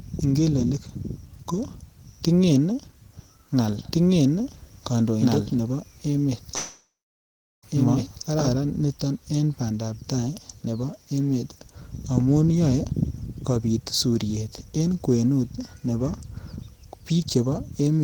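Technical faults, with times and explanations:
3.93–8.54 s, doubled audio track: a second, equally loud copy trails about 1.5 s behind, cutting off abruptly before "niton en bandap tai". Likely a second, slower capture path.
6.55–7.65 s, long network dropout: about 1.1 s is lost, filled by a fading sound that leaves about 0.75 s of silence. Likely packets never arrived.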